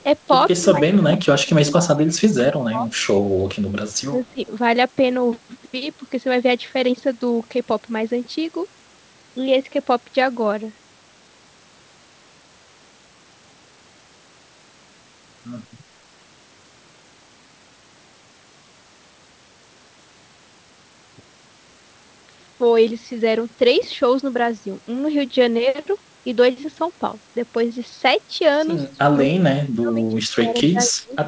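A speech clip with two faults. The talker dips or cuts out at 0.6–0.81, 0.97–2.89, 4.09–4.16, 4.33–4.4 and 28.97–31.14 s, by up to about 30 dB. This is likely speech suppressed in double talk. Faint delayed copies sit about 35 to 40 dB down at 2.91–3.07, 3.92–4.01 and 4.28–4.33 s, lagging 217 ms. That points to echo leak.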